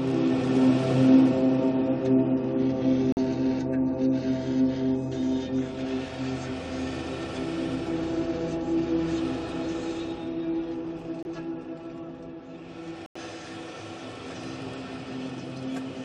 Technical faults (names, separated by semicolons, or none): corrupt frame muted